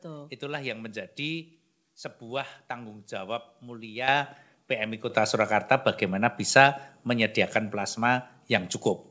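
At 4.08 s, right after "sebuah tanggung jawab", the speech and the background noise jump up together by about 8 dB, and at 5.1 s they step up again by about 6 dB. Both are microphone volume stepped up events. The call software judged the input too quiet and raised the device's input gain in a single step rather than gradually, so everything captured, including the band-limited sound that stops at 8 kHz, gets louder at once.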